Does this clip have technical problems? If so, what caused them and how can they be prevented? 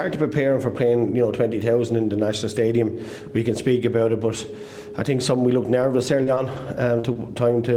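Yes. A lost packet rebuilt from error correction occurs at 5.81, 6.27, 6.36 and 6.57 s: each 20 ms frame was replayed from a low-bitrate backup copy, showing as briefly rougher, noisier texture on a spectrogram. Reducing network loss, or raising the bitrate so the backup copies carry more detail, would prevent this.

Short concealed packet loss occurs at 6.23–6.39, 6.35–6.38, 6.99–7.05 and 7.13–7.17 s. The decoder extended the preceding sound across 20–40 ms holes, which appears as smeared, repeated patterns in the waveform. A larger jitter buffer and a more stable connection would prevent these gaps.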